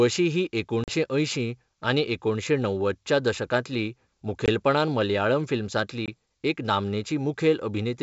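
Speech over a G.722 wideband call, and there's packet loss on an ADPCM call: silent holes at 0.84 s (about 40 ms, roughly two packets, just before "अंयशीं आनी एकुणशें णव्वदच्या"), 4.46 s and 6.06 s (about 20 ms each). After each gap the decoder's predictor is out of step, so the sound comes back slightly distorted for a moment.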